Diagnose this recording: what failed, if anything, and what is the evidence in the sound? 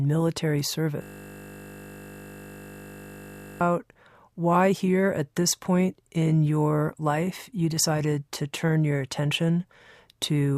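A system hang loop in the driver or buffer from 1.02 to 3.61 s: one 20 ms slice repeats exactly, making a steady 50 Hz buzz rather than a dropout's silence.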